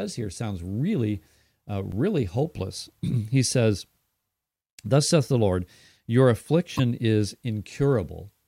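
Damaged data in a compressed stream is heard at 1.92 s and again from 6.76 to 6.80 s. Corrupted bytes cause the decoder to misread those frames and lose sync while it hunts for the next frame header, leaving a brief chirp or blip in the speech.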